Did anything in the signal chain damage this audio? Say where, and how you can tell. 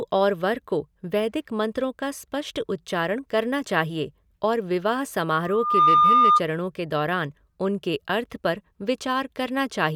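Yes. A loudspeaker feedback squeal in the acoustic playback-to-microphone loop: a 1.2 kHz tone swells over about 0.4 s from 5.37 to 6.41 s, peaking about 10 dB above the speech. That build-up sets it apart from steady hum or interference.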